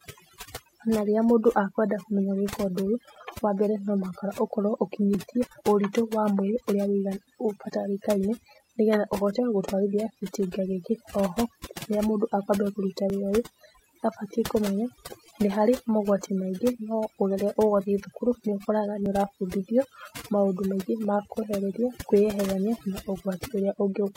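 Overdone noise removal runs through the whole speech clip. The noise reducer was set too strong. Frequency bands near its noise estimate are pulled far down, and quiet parts of the voice go with them. The background drops and breaks up into twinkling specks.

Overlap between stream segments causes six short skips, at 3.16, 5.15, 9.13, 13.10, 19.06 and 21.05 s. Each loses about 33 to 38 ms. The segment time stamps overlap, so the player trims audio that was never doubled. The waveform jumps, giving a click or tiny skip. The skips fall on a 2-second grid, which fits 2-second segments.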